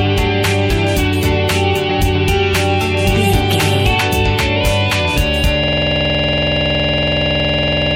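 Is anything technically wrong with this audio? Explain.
Yes. From 5.64 s to the end, a system hang loop: the system froze while the hardware kept replaying one 46.44 ms buffer, which fits 2048 samples, giving a rattling buzz at 21.5 Hz.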